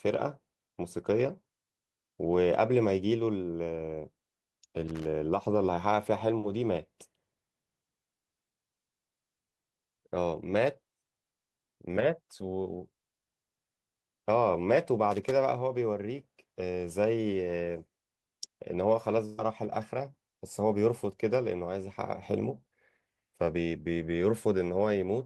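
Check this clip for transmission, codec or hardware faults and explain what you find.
Two kinds of fault turn up in the speech: a loose connector crackle heard twice, and one burst of packet loss later on.

The loose connector crackle runs from 4.88 to 5.05 s and again from 15.11 to 15.32 s. A worn or dirty contact is making and breaking as it shifts, chopping the signal on and off, so each stretch sounds like ragged scratching over the voice. On a waveform the envelope is hacked into irregular gaps and spikes. A spectrogram shows scattered broadband vertical streaks.

The burst of packet loss falls between 19.25 and 19.47 s. About 120 ms of audio never arrived in time, and the receiver bridged it with roughly 123 ms of concealment, stretching the last sound it had and letting it fade. The result is a brief held, fading sound, then a jump forward with a small piece missing. It adds about 9 ms overall. 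A spectrogram shows frozen, blurred horizontal bands dimming, then an abrupt change.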